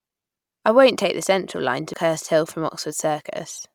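At 1.94 s, damaged data in the compressed stream makes the decoder lose sync on this speech, giving a brief glitch.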